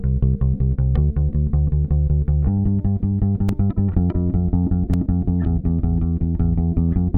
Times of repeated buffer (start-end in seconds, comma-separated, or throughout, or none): 3.49, 4.93